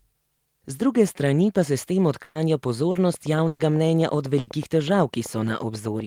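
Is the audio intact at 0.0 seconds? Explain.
Yes, the speech is intact at 0.0 seconds, with no audible fault at that moment.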